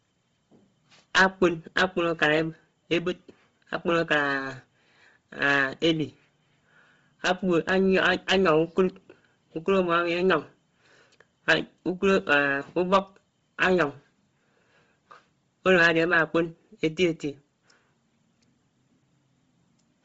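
Throughout the speech, nothing rises above 7.7 kHz, and the top band sounds breathy and grainy. A spectrogram shows a flat ceiling at 7.7 kHz with speckled noise fill beneath it. This is likely heavy Bluetooth LC3 compression, fitting roughly 24 kbps with 7.5 ms frames.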